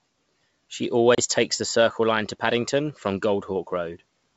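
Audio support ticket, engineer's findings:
Packet loss on ADPCM call, 1.15–1.19 s, before "takes the": about 30 ms hole, roughly three packets. Decoder predictor and step size desync from sender; speech resumes slightly distorted, settling within tens of ms. G.722 path, 64 kbit/s, sounds clean.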